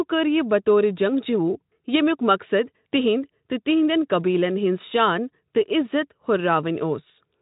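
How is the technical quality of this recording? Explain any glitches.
Nothing here glitches; it's speech carried through a Speex codec at about 18 kbps, and at that rate the coding leaves at most a faint trace.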